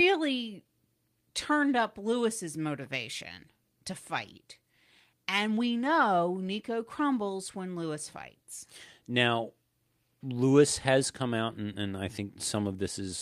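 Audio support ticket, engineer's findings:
Listened through the speech recording and nothing stood out, so there's no fault to log on this one.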